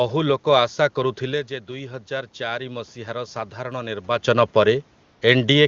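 A speech recording with two system faults. From 1.24 to 4.35 s, automatic gain rising: after the talker moves back from the microphone around 1 s and the level drops by about 10 dB, the gain control slowly raises its gain by about 6 dB, so voice and room noise swell together. From 5.03 to 5.21 s, AMR comfort noise: the phone treats the talker as silent for 180 ms, and the receiver fills the gap with smooth synthetic noise in place of the real room background. The clean AMR-WB coding points to a high HD Voice rate.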